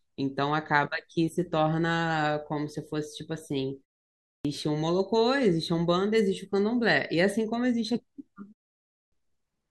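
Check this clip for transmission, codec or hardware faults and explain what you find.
Two faults are audible, both a clipped start after a pause. At 4.18 s, after a 0.41 s pause, about 270 ms of speech is lost. At 8.81 s, after a 0.35 s pause, about 310 ms goes. The output device sleeps during silence and needs time to wake. So speech resumes abruptly, its opening sounds missing.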